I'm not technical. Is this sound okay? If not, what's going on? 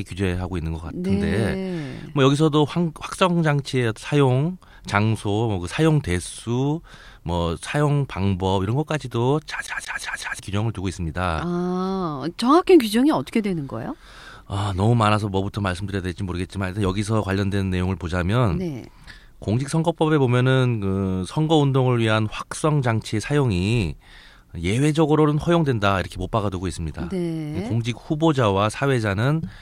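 No. There's a CD stuck on one turn from 9.67 to 10.39 s. A scratch makes the player's laser jump back at the same spot each time the disc spins, so the same 0.18 s of speech repeats 4 times, with a brief silence at each jump.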